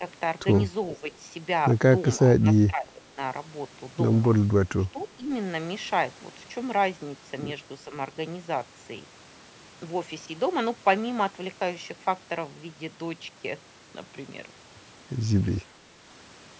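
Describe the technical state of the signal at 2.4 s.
At 2.4 s the speech briefly sinks. From 2.34 to 2.46 s the level drops by roughly 15 dB, and for about a tenth of a second the speech dips. The likely cause is speech suppressed in double talk. Both ends spoke at once. The echo canceller could not tell the local talker from loudspeaker echo, so it pulled the whole signal down. The band still tops out at 8 kHz, as the call processing leaves it.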